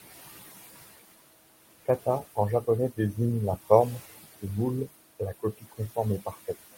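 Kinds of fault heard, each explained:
noise suppressor artifacts: The background, room noise about 14 dB under the speech, sinks between phrases and swells back beneath them. A suppressor is lowering the bands it judges to be steady noise by about 17 dB, frame by frame.
speech cut by the noise suppressor: Brief stretches of speech turn faint and swallowed around 1.86 to 2.38 s, 5.4 to 5.97 s and 6.21 to 6.55 s, dipping by about 17, 18 and 12 dB. The suppressor mistook quiet speech for noise and turned it down.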